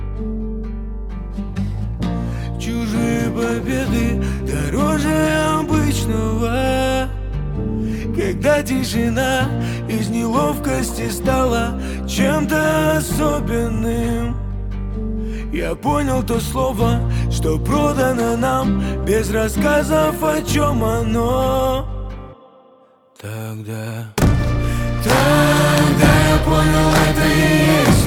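A brief smeared wobble around 4.35 to 4.42 s, where the sound seems to hang and blur before settling back, is short concealed packet loss. About 40 ms of audio never arrived in time, so the decoder extrapolated from the preceding sound to fill the gap, then crossfaded into the real signal.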